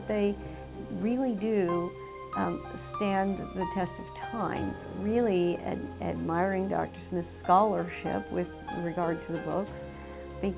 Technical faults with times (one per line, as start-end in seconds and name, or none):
none